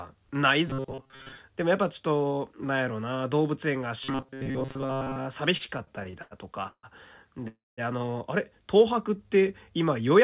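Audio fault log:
0.68–1.38 s and 4.04–5.19 s, robotic sound from repeated short buffers: in both spans the speech turns into a rigid metallic buzz at 134 Hz that still follows the words loosely. A fixed pitch at that rate fits a segment of roughly 7.5 ms being replayed over and over in place of fresh audio, with most of the signal in each span repeated rather than new. The likely cause is audio reaching the playback side too rarely, so the last short buffer loops while the real material is skipped.
5.57–6.86 s, repeated stalls (stutter): the audio hangs eleven times in quick succession, each stall bridged by extending the last sound, the longest lasting 153 ms. About 391 ms of filler is inserted in total, roughly 30% of the span, yet nothing is dropped. The result is halting, dragging delivery as packets keep arriving later than playout needs them and the jitter buffer repeatedly runs dry.
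7.48–7.80 s, call audio freeze: the sound stops and the last fragment is carried forward as a fading tail that falls to silence for about 190 ms, with 297 ms of fill in all. Playback then resumes exactly where it left off, so no speech is lost but everything after is pushed back by about 0.3 s. This is likely a single delivery hold-up that emptied the jitter buffer until the delayed packets came through.
8.78–10.09 s, jitter buffer slow-down: the speech runs at about 94% speed with pitch unchanged, sounds stretched slightly, in the band-limited G.711 call sound that carries nothing above 4 kHz. Around 79 ms is added by repeating individual pitch periods and pause fragments to rebuild the buffer's reserve.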